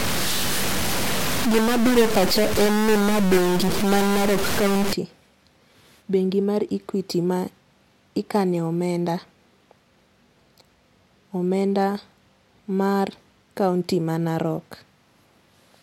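From 0 to 4.93 s the speech has harsh, buzzy distortion, and the pauses fill with noise. This is a stuck bit. One data bit is likely held fixed. About half the samples shift by a step of about -20 dBFS.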